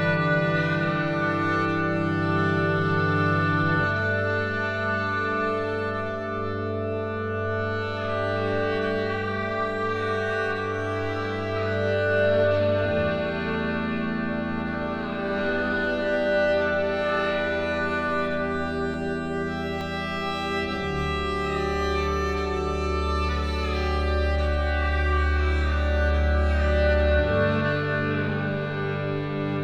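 The likely cause is a dropped buffer (overrun): the program failed to collect a block of samples before the hardware overwrote it, so that block is lost and the audio on either side is spliced straight together. This happens at 18.94 s and again at 19.81 s, each time skipping roughly 10 ms. There is no gap of silence; each is heard as a small jump forward in the sound.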